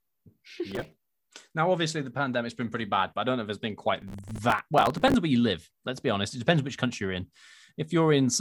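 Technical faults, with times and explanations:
0.71–1.09 s and 4.02–5.14 s (from "if it's been quite" to "where you live"), processor overload crackle: the overloaded processor misses dozens of few-millisecond buffer deadlines in a row, each repeating a hard-edged scrap of old audio, heard as gritty crackle over the speech.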